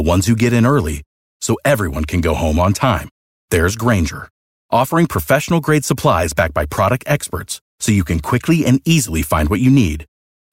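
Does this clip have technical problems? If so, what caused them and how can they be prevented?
No, there are no technical problems to report here.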